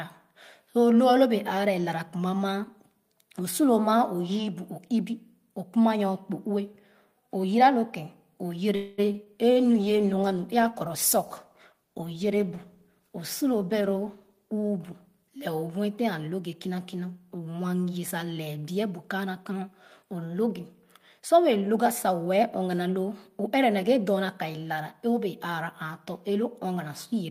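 A speech recording with several call-transport faults. From 8.75 to 9.00 s the sound stalls into a fading buzz-like continuation of the last sound, then resumes exactly where it stopped with nothing lost: a call audio freeze, likely from delayed packets draining the jitter buffer, adding about 0.23 s of delay. Short concealed packet loss follows at 9.12–9.16 s and 9.24–9.28 s, each a brief smear where about 20 ms of real audio was replaced by extrapolated sound. From 9.56 to 17.05 s the audio turns coarse and muffled, with the top end cut, as a call bitrate drop. The sound points to the encoder falling from around 48 to 18 kbps, staying at the lowest rate for roughly 4.7 s. Between 19.50 and 22.16 s a jitter buffer speed-up runs the audio at 108% without any pitch change. Short pitch-period slices totalling about a fifth of a second are removed, so the speech sounds hurried.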